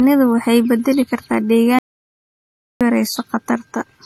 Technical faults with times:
0.00-4.05 transcoding between lossy codecs
1.79-2.81 audio dropout to silence

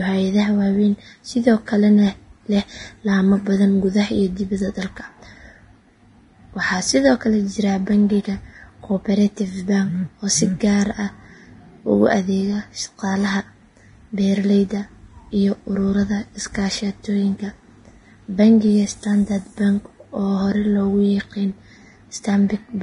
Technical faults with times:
0.00-22.83 Vorbis compression

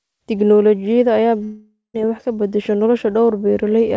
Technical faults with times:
1.44-1.96 long network dropout

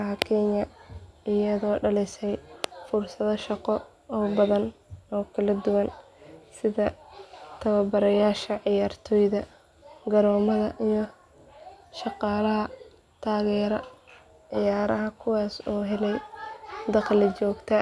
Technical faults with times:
none

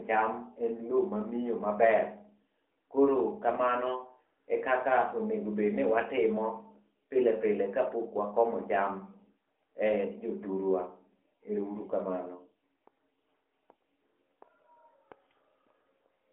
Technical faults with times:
none

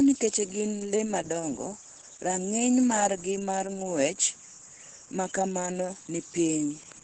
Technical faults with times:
0.00-7.04 Opus voice compression

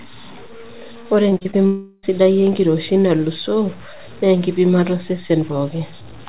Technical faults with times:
0.00-6.28 low bit depth without dither
1.30-1.55 repeated packet loss (robotic sound)
1.67-2.05 long network dropout

